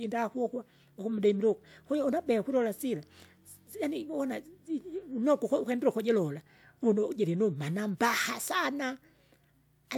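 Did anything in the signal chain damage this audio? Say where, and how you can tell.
No, nothing along the chain has left an audible mark on this speech recording.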